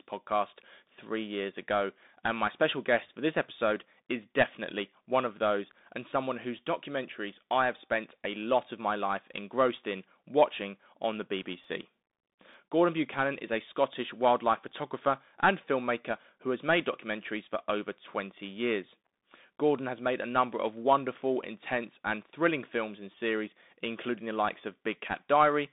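From the start the speech comes through the Bluetooth CVSD headset codec, confined to roughly 200 Hz to 3.7 kHz with nothing above 3.8 kHz. Its one-bit delta coding, consistent with a 64 kbps link, leaves a granular hiss and scratchy sibilants rather than the warbly, watery smearing of a frame-based codec.

Just after "in watching on the", from 11.34 to 12.54 s, come CD scratch ticks: five short ticks, the longest only a few milliseconds, where the player patched over data lost to a scratch. Their steady spacing of roughly four a second, one per disc turn, separates them from random digital clicks.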